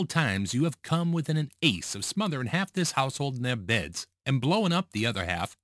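Aliasing runs through the whole speech clip. The audio was brought down to a lower sample rate, which fits a drop to about 22 kHz, without first removing content above the new limit of 11 kHz. That high energy folds back below 11 kHz at about 20 dB under the speech, giving sibilants a gritty, metallic edge. Clean band-limiting would simply dull them. Here the spectrum runs hard up to 11 kHz and the false tones sit at pitches unrelated to the speech.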